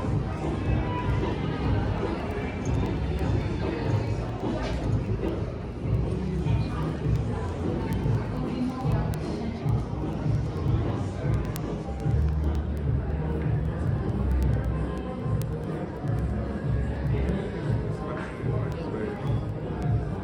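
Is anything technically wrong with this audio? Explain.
Yes. Word clock ticks run from 0.11 to 20.15 s. Two unlocked clocks slip about 200 ppm, misreading samples: sharp, uneven ticks roughly ten times a second.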